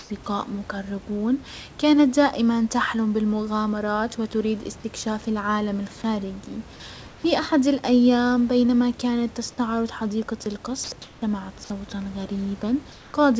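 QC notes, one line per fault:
0.0–0.10 s, 7.08–7.24 s, 11.02–11.22 s and 12.92–13.14 s, comfort noise in place of the background: in each pause the sender likely stopped transmitting under discontinuous transmission, and the receiver filled the gap with synthetic noise. The room's real background, about 24 to 26 dB below the loud speech, becomes a flat, featureless hiss for 0.1 to 0.22 s: up to about 3 dB quieter at 7.08 s, after "وتريد استكشاف العالم الخارجي" and before "احد الايام بينما كانت", and level at the opening before "مقربون كانت دائما تحلم".
10.84–10.92 s, sound dropped by the voice detector: right after "بينما كانت تستعرض حديقة", the sender's voice detector mistook part of the speech for background and likely stopped sending. About 50 ms of speech is lost, and 80 ms of steady comfort noise plays in its place. The speech gives way to smooth hiss before the detector triggers again. 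Above 8 kHz the audio is empty throughout, as expected over this G.722 call path.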